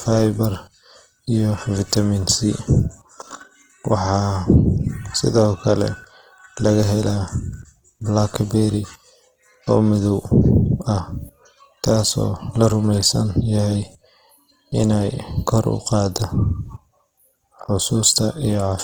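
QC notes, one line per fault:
Throughout: Opus compression, likely in its CELT music mode at a low rate in the region of 16 kbps. The speech sounds grainy and rough rather than swirly, because the encoder keeps each band's energy but, short of bits, refills the finer detail with folded copies of lower bands or with noise. Few gaps open in the spectrum, and the bandwidth stays full, reaching 20.2 kHz, so the damage is plainly audible as texture, not muffling.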